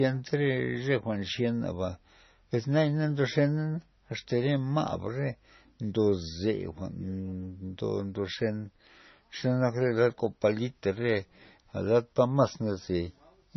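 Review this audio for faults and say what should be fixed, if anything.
Throughout the speech, the sound has a hard ceiling at 6 kHz and a watery, swirling quality, likely from MP3 compression at a very low bitrate, around 24 kbps. Starved of bits, the encoder drops the treble and blinks weak frequency lines on and off between frames. A plain low-pass filter would dull the top just as cleanly but leave no swirl or chirping on s sounds. Encoding at a higher bitrate, or with a lossless format, would prevent it.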